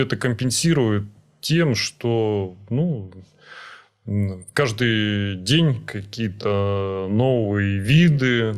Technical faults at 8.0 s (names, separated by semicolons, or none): time-stretched section